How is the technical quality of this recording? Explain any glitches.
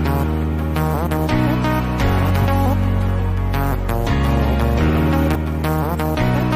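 Two brief glitches mar the recording, at 2.42 s and 5.34 s: damaged data in a compressed stream makes the decoder lose sync, producing a short disruption in the audio.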